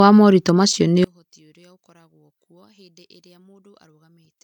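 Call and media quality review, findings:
Throughout: speech carries the artefacts of a low-rate encode inside a 320 kbit/s MP3. Low-bitrate audio saved at a high bitrate, likely from an HE-AAC source near 48 kbit/s.

From 1.04 s to the end at 4.44 s, after "wa moritũ macio nĩ": speech collapses by about 35 dB in mono. One channel is likely inverted, so the summed channels cancel.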